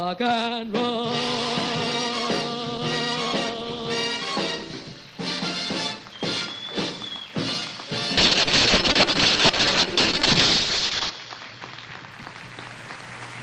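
A call bitrate drop runs from 8.18 to 12.17 s: the bandwidth estimate fell, starving the encoder of bits, so the audio turns coarse and muffled, its top end cut from 20 kHz to 8 kHz, worst for 2.9 s, consistent with a 32-to-7 kbps fall.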